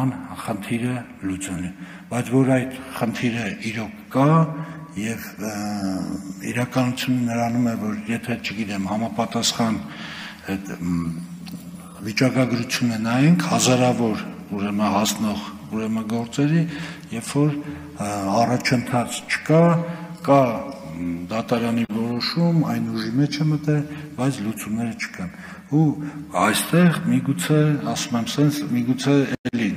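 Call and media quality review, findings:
No faults found in this recording. Nothing audible points to a problem in the capture, transport or playback path.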